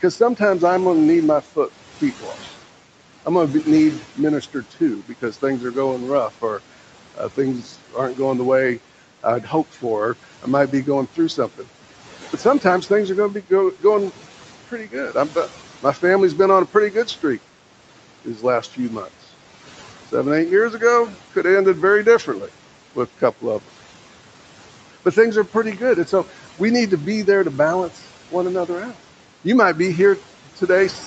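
Noise suppressor artifacts run through the whole clip: the suppressor pulls steady background down by about 12 dB frame by frame, so the noise sinks between the words and rises under them. Speech cut by the noise suppressor follows at 1.43–8.18 s after "going to need my", 9.23–12.88 s after "going the way", 13.81–17.23 s, 18.25–19.09 s, and 27.95–29.45 s after "to be there to". In each span the suppressor mistakes part of the speech for noise and drops it by about 10 to 12 dB, so it sounds swallowed.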